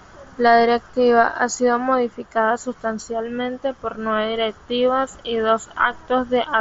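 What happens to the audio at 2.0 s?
At 2.0 s the speech carries straight through with no dropout, click or distortion, only the slightly band-limited, wideband-headset sound of the mSBC Bluetooth link it travels over.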